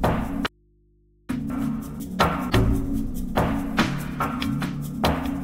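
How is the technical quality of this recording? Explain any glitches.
The recording has two faults in its first half.

From 0.47 to 1.29 s there is an audio dropout to a faint residue: the signal cuts abruptly for 820 ms, leaving only mains hum roughly 35 dB down, likely from a live but disconnected input.

From 1.5 to 2.5 s, chunks play out of order: a 500 ms chunk arrives one chunk late, swapping places with its neighbour and producing a jumbled second with three hard joins.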